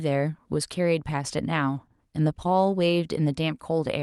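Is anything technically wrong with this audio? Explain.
No, nothing technically wrong can be heard anywhere in this speech recording.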